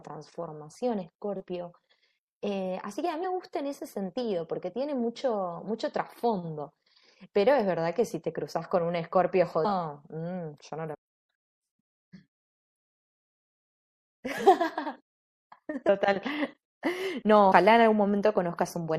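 It's a speech recording with a constant watery, swirly quality on top. The sibilants have a chirpy, metallic edge, which is plainly audible codec damage. That's likely MP3 compression, and the sound fits a low bitrate of around 64 kbps, where the encoder runs short of bits and drops weak high-frequency detail from frame to frame. There are also compressed frames skipped at 3.23, 9.64, 10.93, 15.88 and 17.51 s. At each one the speech jumps ahead, by roughly 150 ms, 300 ms, 200 ms, half a second and 70 ms respectively. The jumps come in steps that fit frames of about 24 ms. Each join is a short smeared blip rather than a sharp click, because neighbouring frames overlap.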